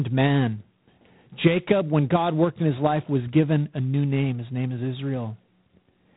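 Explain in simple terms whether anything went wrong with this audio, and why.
G.726 ADPCM coding runs through the whole recording. Rather than storing the speech in full, it stores only rough guesses of how each moment differs from the last, using very few bits. That leaves a harsh, rasping hiss that swells with the speech, and nothing above about 3.9 kHz survives.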